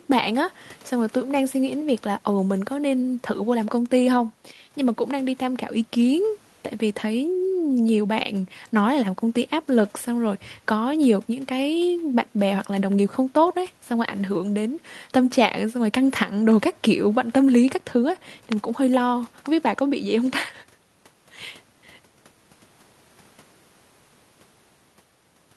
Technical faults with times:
none

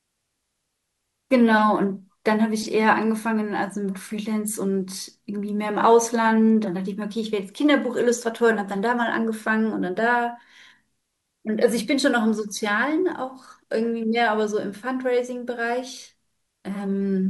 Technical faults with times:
none

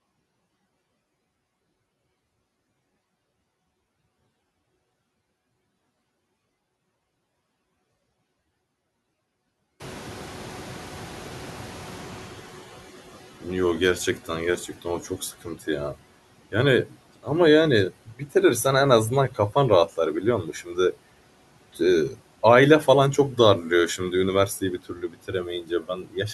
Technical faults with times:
9.80-12.96 noise suppressor catching up
16.85-16.96 speech cut by the noise suppressor
17.90-18.34 speech cut by the noise suppressor
19.29-19.56 speech cut by the noise suppressor
20.43-20.95 speech cut by the noise suppressor
24.78-26.18 speech cut by the noise suppressor

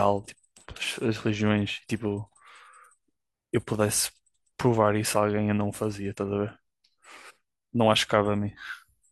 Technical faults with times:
none

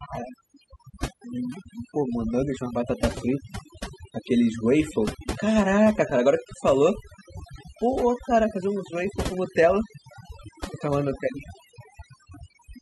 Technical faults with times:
0.00-12.81 overdone noise removal

